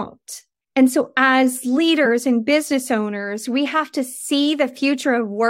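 At 3.65 s, right after "and business owners we", there's a case of compressed frames skipped: about one frame's worth, roughly 20 ms, just isn't played, so the audio jumps ahead.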